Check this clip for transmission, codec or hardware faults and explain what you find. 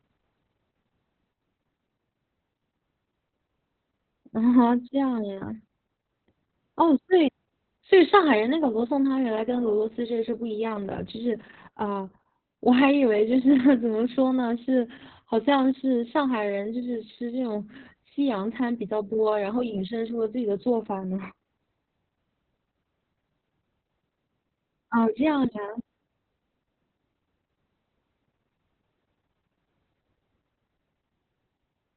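One fault runs through the whole clip: Opus voice compression at a heavy level of damage. The speech has nothing above 4.2 kHz, which points to the SILK coder working in narrowband at a very low rate, around 6 kbps. The predictor models the vocal tract well enough, but the excitation is coded so coarsely that voicing turns hoarse and faintly robotic. A plain low-pass filter would muffle the sound without adding that buzzy, synthetic texture.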